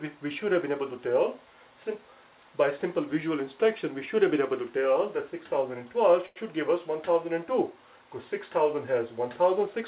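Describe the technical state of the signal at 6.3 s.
A short stall from a late packet runs from 6.26 to 6.38 s. The jitter buffer ran dry, so the receiver stretched the last sound for about 97 ms, then resumed from the same point, adding 97 ms of delay. The held sound is drawn out too long within the 4 kHz call band.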